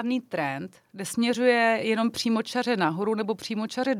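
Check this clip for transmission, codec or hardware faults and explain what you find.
No faults turn up when checking this clip.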